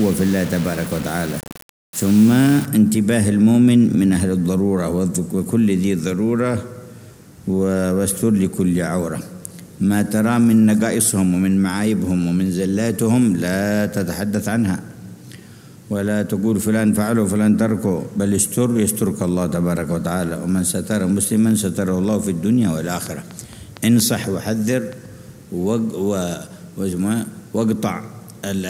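From 0 to 2.66 s the audio carries low bit depth without dither: a coarse, grainy distortion that rises and falls with the sound itself, sitting roughly 20 dB below it. The likely cause is rounding to very few bits, consistent with around 5, with no dither added. Unlike steady hiss, the grit tracks the signal and turns harsh on quieter passages. Unlike the later fault, it has no separate events.

From 23.07 to 24.94 s a train of clicks rides over the sound. Around ten near-identical pulses arrive at a regular 4.3 per second, a little louder than the audio and audible in gaps too. That steady, repeated shape distinguishes it from random crackle or dropouts and likely points to interference from nearby equipment or a faulty connection or power supply, not to damage within the recording itself.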